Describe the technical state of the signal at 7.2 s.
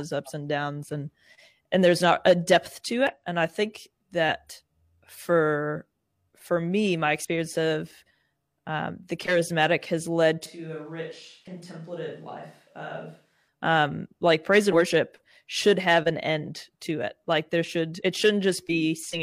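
Damaged data in the compressed stream at 7.25 s makes the decoder misread a frame and lose sync, producing a brief chirp, squawk, click or short hole in the speech.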